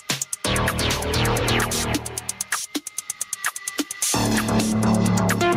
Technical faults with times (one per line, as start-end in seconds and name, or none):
0.00-5.56 gain pumping
1.01-4.56 sample clock jitter